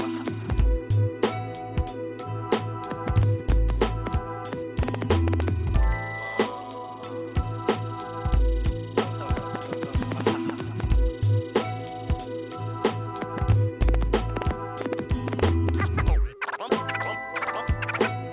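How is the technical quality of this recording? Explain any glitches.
No technical glitches can be heard anywhere in the recording. Every part of the audio sounds continuous and intact, so there is nothing to explain.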